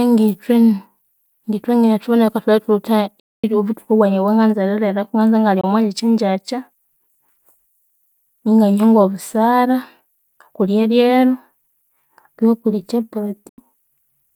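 Speech cuts to sudden silence at 3.20–3.44 s, 5.61–5.64 s and 13.49–13.58 s, likely a Bluetooth dropout from late wireless packets. The waveform shows flat gaps, and the spectrogram shows blank vertical bands.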